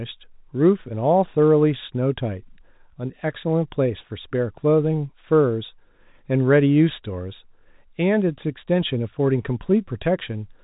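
No technical faults occur in this speech, which carries the narrow telephone band of G.711 coding with nothing above about 3.8 kHz.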